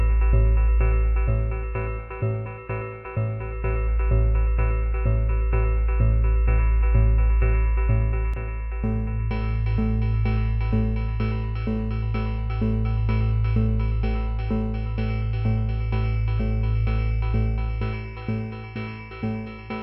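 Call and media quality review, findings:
One channel drops out from 8.34 s to the end of the clip. Sound common to both sides falls abruptly by about 6 dB in the mono sum; anything carried only on the lost side vanishes. Likely a failed channel in capture or interface routing. Waveform: sudden step down in amplitude at 8.34 s, never recovering. Spectrogram: uniform darkening across all frequencies from that point, with any single-side content gone.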